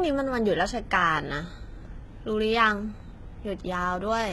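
From start to finish, the speech has a bright but synthetic top end, with s sounds turning gritty and lispy and nothing present above about 11.8 kHz. The likely cause is heavy HE-AAC compression, at a rate that points to roughly 16 kbps. The codec keeps only the lower spectrum and fakes the treble by copying lower bands upward under a coarse envelope. The rebuilt harmonics don't align with the real ones, hence the metallic edge on sibilants.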